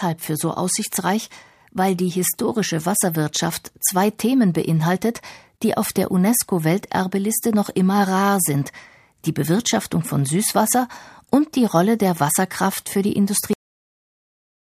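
At 13.53 s, right after "für die", the speech stops mid-sound. This is a cut-off end. The final buffers were never written or played. There is no decay. The signal drops straight to digital silence, which holds for the last 1.2 s.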